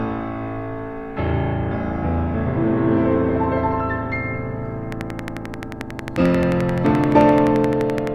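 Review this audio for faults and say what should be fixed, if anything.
Something in the chain, likely nearby electrical interference or a faulty connection or power supply, injects near-identical pulses from 4.92 s to 8.08 s. The result is a train of clicks at a steady 11.4 per second, around forty in all, ticking roughly 10 dB above the sound and through its pauses. To prevent it, move the recording setup away from interfering equipment, check the interface's cabling and power, and give the interface enough buffer headroom.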